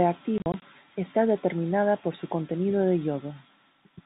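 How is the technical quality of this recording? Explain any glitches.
The recording has one clear glitch, heard through telephone-band G.711 coding that cuts everything above 4 kHz. Between 0.38 and 0.62 s, just before "está determinada por su", packet loss filled with silence punches gaps into the speech: about 100 ms of audio vanishes across a 240 ms stretch, the longest hole 40 ms, which fits five 20 ms packets going missing. The receiver inserts plain silence, so each gap starts and stops abruptly. Concealment would instead smear or repeat the surrounding sound.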